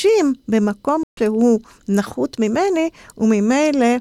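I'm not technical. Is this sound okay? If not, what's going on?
No. At about 1.03 seconds the speech cuts out for roughly 0.14 seconds, until 1.19 seconds. This is a stream reconnect: the connection dropped, the player restarted, and the speech resumes a little later, skipping a fraction of a second.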